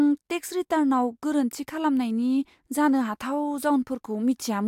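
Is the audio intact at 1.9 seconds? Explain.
Yes, the speech at 1.9 seconds plays through intact, with no audible fault at that point.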